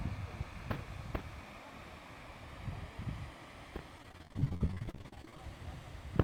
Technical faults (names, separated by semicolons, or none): repeated packet loss (robotic sound); jitter buffer speed-up